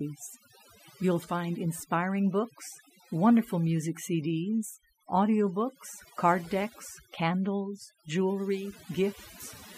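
A speech recording with overdone noise removal running throughout: the noise reduction was set far too aggressively for a noisy source, so it pulls individual frequency bands down hard, or mutes them, whenever they sit close to its noise estimate, and softer parts of the voice fall below that line too. Between phrases the background collapses into near silence dotted with twinkling specks.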